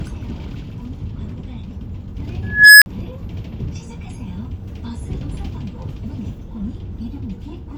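At 2.43 s an unstable filter takes over: a tone around 1.5 kHz swells over about 0.39 s into a harsh, clipped squeal, then the runaway recursion overflows and the audio drops out for about 44 ms before resetting at 2.86 s. Unlike acoustic feedback howl, it ends in abrupt silence.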